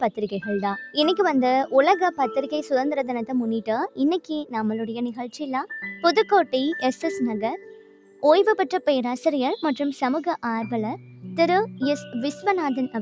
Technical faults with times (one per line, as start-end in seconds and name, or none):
0.00-13.01 noise suppressor applied to music or sounds
4.20-4.54 sound cut by the noise suppressor
5.18-5.36 sound cut by the noise suppressor
7.58-8.23 sound cut by the noise suppressor